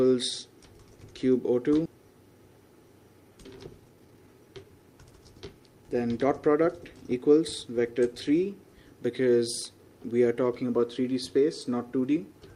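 At 1.85 s a skip ahead occurs: about a second of already-queued audio was discarded, so playback jumps forward, with the two sides of the cut joined almost seamlessly. From 3.31 to 7.16 s a jitter buffer speed-up trims short pitch-period pieces repeatedly, shedding roughly half a second; the sound runs about 115% fast at unchanged pitch and feels hurried.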